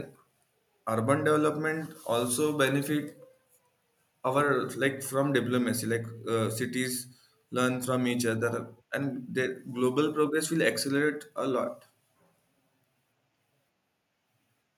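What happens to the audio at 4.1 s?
Nothing goes wrong at 4.1 s; the speech carries on intact through that moment, with no dropout, click or distortion.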